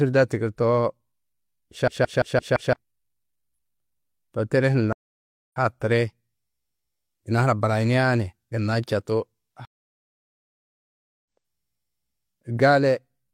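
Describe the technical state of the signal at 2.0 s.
At 2.0 s the speech is in a system hang loop, 1.88 to 2.73 s. A frozen system left the hardware replaying one 0.17 s ring buffer, which fits 8192 samples. Unlike random dropouts, exact repeats at 5.86 Hz give a machine-gun stutter, losing about a second.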